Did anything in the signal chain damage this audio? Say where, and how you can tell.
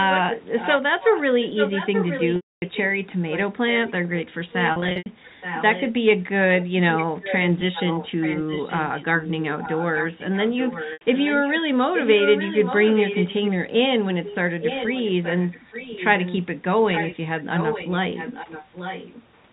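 Yes. The first fault sits in the call processing at the far end: a loudspeaker's output reached its microphone, and the echo canceller likely failed to remove it, so that residue was sent back. A delayed copy of the speech trails the original by about 0.87 s, roughly 5 to 10 dB below it. The echo leak runs from 0.0 to 2.97 s, 3.29 to 5.92 s, 6.59 to 11.61 s, 11.94 to 13.51 s, 14.25 to 16.37 s, 16.93 to 17.16 s, and 17.56 to 19.26 s. It is strongest in the first, fourth and sixth stretches.

The second fault is on the network, where packets went missing and the receiver covered each gap by repeating the last pitch period. This packet loss with pitch repetition appears at three points. From 2.36 to 2.62 s, a 260 ms gap is bridged by the repeated pitch period, which fades into silence, and the speech cross-fades back in. From 4.72 to 5.06 s, 220 ms is lost in scattered bursts of up to 80 ms each. 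At 10.93 to 11.01 s, an 80 ms loss is bridged the same way.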